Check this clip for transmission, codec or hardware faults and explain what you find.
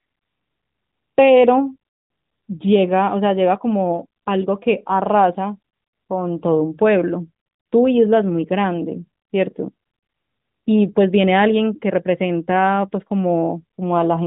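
No transmission, codec or hardware faults are present.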